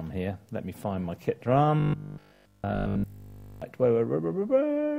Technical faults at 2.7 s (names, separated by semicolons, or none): robotic sound from repeated short buffers